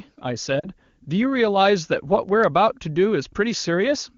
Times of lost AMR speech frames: 0.59-0.68

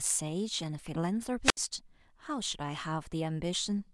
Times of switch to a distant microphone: none

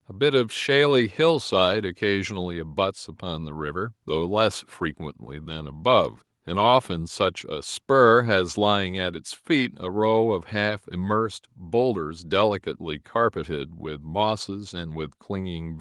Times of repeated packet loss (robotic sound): none

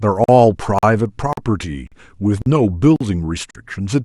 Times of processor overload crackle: none

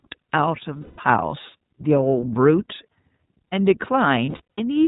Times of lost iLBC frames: 0.82-1.00, 4.26-4.59

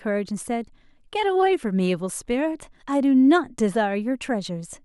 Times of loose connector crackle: none

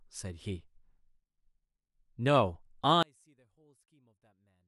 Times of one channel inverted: 3.03-4.67

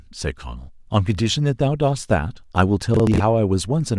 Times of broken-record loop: none

